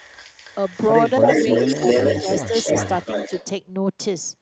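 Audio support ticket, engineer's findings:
Echo leak, 0.0 to 3.46 s. Delayed copy of the speech, about 329 ms behind, roughly as loud as the direct speech. Far-end loudspeaker pickup passing through. Likely incomplete cancellation in the far-end echo canceller, returning its residual to us.

Speech suppressed in double talk, 2.23 to 2.27 s. Brief dip of roughly 5 dB, about 40 ms. Occurs while echo overlaps speech. Likely the echo canceller's suppressor misreading near-end speech as echo.

Same fault, 2.47 to 2.53 s. Dip of roughly 5 dB again, about 70 ms. Same overlap and same mechanism.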